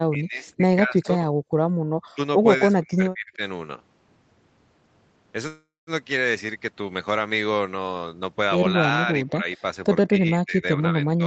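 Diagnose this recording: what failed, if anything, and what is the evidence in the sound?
The call processing is pulling the near talker down in stretches, most likely speech suppressed in double talk, with the echo canceller ducking everything while the far side is also talking. Listen at 0.1–1.2 s (dips of roughly 20 dB), 2.13–2.2 s (a brief hole, around 40 dB deep), 2.68–3.41 s (roughly 35 dB) and 9.06–9.58 s (a milder 10 dB or so), plus 10.08 s to the end (roughly 15 dB). The canceller can't separate the talker from the loudspeaker echo, so it just turns both down.

The echo canceller is also gating the background, again in call processing. From 1.48 to 1.85 s the room sound gets clamped hard, about 40 dB down, for around a fifth of a second in total, then comes back as the canceller lets go. It's treating the loudspeaker playback as a reason to shut the mic, so the ambience briefly drops out instead of staying steady underneath.

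Over 5.47–5.90 s there's a call audio freeze, likely from packets stalling on the network so the jitter buffer ran dry. The receiver filled about 398 ms by stretching out the last bit of sound, which fades away, and roughly 200 ms of that is outright silence. When the packets catch up, the audio picks up where it stopped. Nothing is lost, but the stream now runs about 398 ms later.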